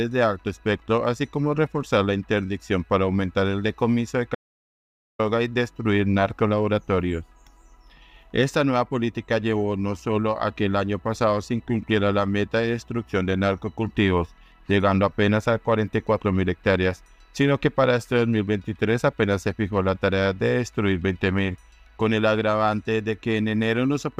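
The input signal was likely lost for a moment, through a dropped connection or a stray mute, while recording continued and wrote silence. The result is an audio dropout to silence from 4.35 to 5.19 s: the sound cuts off abruptly, about 0.84 s goes completely dead with no room tone, then resumes mid-flow.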